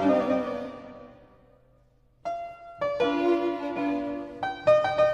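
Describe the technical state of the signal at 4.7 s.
At 4.68 to 4.71 s the signal shows hard clipping. For about 33 ms the peaks exceed what the stage can pass by about 2 dB, so their tops are sliced flat rather than rounded. Those flat edges add high-frequency harmonics, heard as a brief crackle on the peak. Unlike a single click or dropout, the damage follows the waveform's own loud cycles, and unlike soft saturation it is abrupt and gritty rather than warm.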